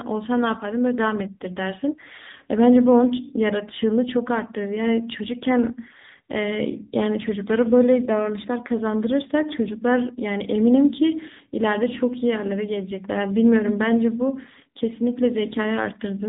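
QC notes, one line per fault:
throughout: AMR narrowband mobile codec. Nothing above 3.8 kHz survives. The speech sounds plainly buzzy and synthetic, which points to a low bitrate near 8 kbps.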